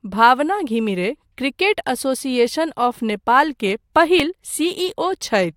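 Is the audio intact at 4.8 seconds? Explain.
Yes, the speech at 4.8 seconds plays through intact, with no audible fault at that moment.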